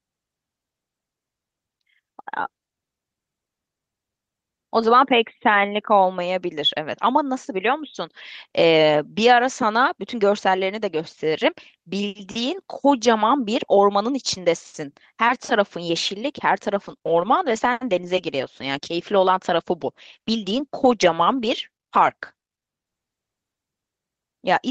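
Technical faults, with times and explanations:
16.87 to 23.93 s, call bitrate drop: the call's bandwidth estimate fell, so the encoder was pushed onto a much smaller bit budget. The change in sound fits a drop from about 32 kbps to about 13 kbps. With fewer bits, the Opus coder quantises the speech more coarsely and narrows the audio band from 20 kHz down to 8 kHz. The speech loses its top end and turns dull, grainy and watery. It stays at that lowest quality for about 5.75 s before the bitrate climbs back.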